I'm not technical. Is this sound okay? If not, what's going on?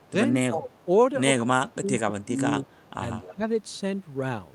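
No, there are two problems of the kind that come from one side of a call using a loudspeaker.

The first is an echo leak. A faint repeat of the speech trails about 0.18 seconds behind the original at 0.0 to 0.11 s, 0.79 to 0.84 s, 1.7 to 1.87 s and most noticeably from 2.67 to 3.34 s, where it is loudest. This likely happens because the far end's echo canceller didn't fully remove its loudspeaker sound from its microphone. What gives it away is that something extra is added: a ghostly copy on top of the speech.

The second is speech suppressed in double talk. From 0.08 to 0.77 s, 1.41 to 2.39 s and 3.19 to 3.45 s the speech itself drops away in patches, sharply at times in the middle stretch and only mildly near the end. This is likely the echo canceller getting confused when both sides overlap and turning everything down. Unlike the echo leak, nothing is added here. The speech just thins or briefly vanishes.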